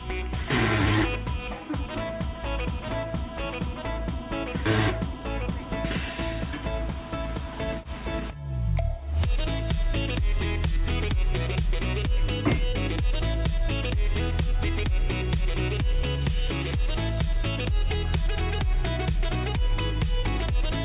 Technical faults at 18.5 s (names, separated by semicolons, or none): none